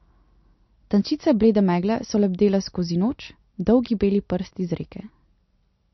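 Throughout, the speech is dull above 5.9 kHz and audibly watery, likely MP3 compression at a low bitrate near 35 kbps; the flickering swirl distinguishes it from a plain low-pass filter.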